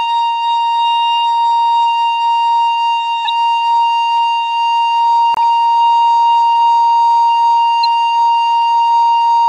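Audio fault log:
3.25, 5.34 and 7.83 s: corrupt frame decoded. Damaged frames were played anyway, so each gives a short chirp, squeak, blip or burst of noise from energy at the wrong frequencies, lasting a frame or two.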